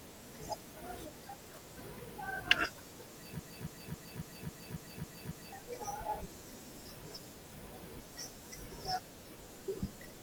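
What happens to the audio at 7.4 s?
Nothing goes wrong at 7.4 s; the speech runs on intact through that moment.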